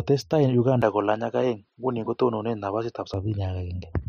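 Input switched to a poorer device, from 0.82 to 3.14 s: the speech abruptly loses everything above 8.5 kHz and turns duller, with a faint new noise floor well below the voice, then clears again. This likely reflects the recording changing to a narrower-band microphone path.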